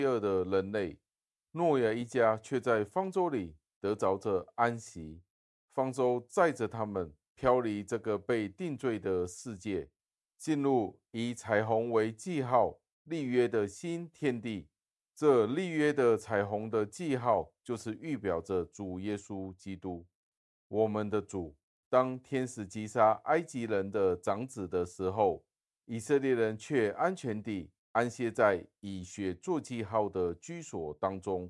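Listening closely to the speech, I heard nothing that stood out as a technical fault at any point.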